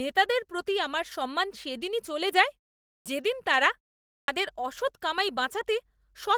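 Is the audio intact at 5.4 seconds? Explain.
Yes, the speech is intact at 5.4 seconds, with no fault at that moment.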